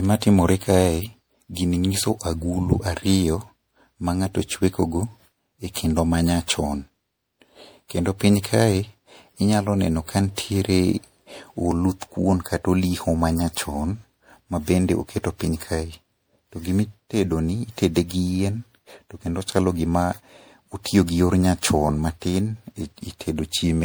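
From start to finish the speech carries generation loss. It sounds swirly, hollow and smeared, and consonant onsets arrive blurred rather than crisp. The likely cause is repeated lossy re-encoding, something like seven passes through MP3 at a rate consistent with 96 kbit/s. Each pass quantises on a shifted frame grid, so the errors stack. A spectrogram shows ragged, flickering holes and a smeared upper band, and in the waveform the transients look softened and rounded.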